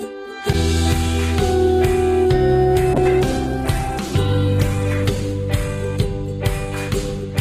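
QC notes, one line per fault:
2.95 s to the end: call bitrate drop. The sound turns rough and watery and loses its top end, staying at its most degraded for about 1.8 s, with no recovery before the clip finishes. This fits the call's bandwidth estimate falling and the encoder being pushed from roughly 64 kbps down to 12 kbps. Opus then quantises far more coarsely and, at that rate, cuts off the high frequencies, giving the muffled, smeared texture.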